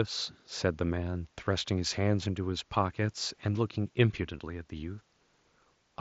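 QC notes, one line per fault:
4.38 s, concealed Bluetooth headset packet loss: a 7.5 ms dropout between headset and phone, filled by copying recent waveform, so it is nearly hidden.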